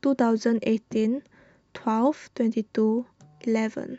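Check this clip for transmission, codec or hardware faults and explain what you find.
One fault is present. Overlap between stream segments at 2.28 s in the speech: two consecutive segments, each about 2 s long, carried time stamps that overlapped, so the player discarded the overlap. Roughly 16 ms of real sound vanished, and the waveform jumps there, heard as a brief click or skip.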